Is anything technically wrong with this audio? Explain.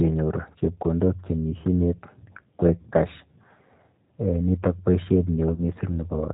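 Yes. The whole clip carries G.729 codec damage: band-limited below 4 kHz, slightly rough and synthetic, consistent with an 8 kbit/s model that rebuilds speech from filter, pitch and pulse parameters.

There is also VoIP packet loss concealed by the speech codec at 0.59 to 0.61 s, 2.60 to 2.63 s, and 5.54 to 5.62 s just after "nito boishet". The first two are about 20 ms gaps, fitting one lost packet each, and the last is about 40 ms. The decoder extrapolated from its previous state and faded the gain, producing brief stretched, fading dropouts.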